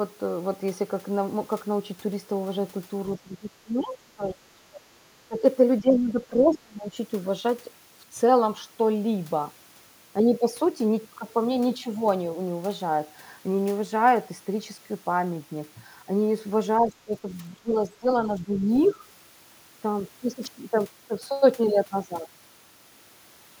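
From 3.22 to 4.83 s, 5.14 to 5.42 s, 5.81 to 6.97 s, 16.8 to 17.28 s and 17.61 to 19.02 s, the speech is suppressed in double talk. The level dips by up to about 25 dB. This is likely an echo canceller turning the talker down while the far side also spoke. From 18.52 to 18.94 s, the other side's voice leaks through, about 20 dB below the speech. It is likely loudspeaker echo that the canceller left in the microphone signal.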